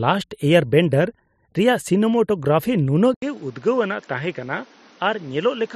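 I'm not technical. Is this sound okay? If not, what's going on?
No. At 3.14 s there is a short gap, about 0.08 s, and then the speech turns duller and a bit quieter until the end. A new background noise appears. This is likely an input switched to a poorer device, such as another microphone.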